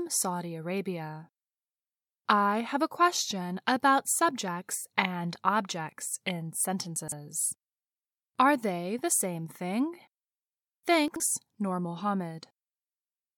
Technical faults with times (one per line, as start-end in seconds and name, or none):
6.96-7.12 chunks out of order
11.08-11.20 chunks out of order